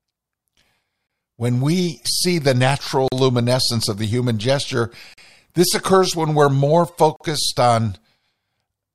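At 1.07, 3.08, 5.14 and 7.16 s, hard-edged silences of 26 to 42 ms cut the speech: a gap between stream segments, recurring every 2 s, where segment time stamps leave holes filled with silence. Waveforms show flat, near-silent runs; spectrograms show thin blank vertical stripes.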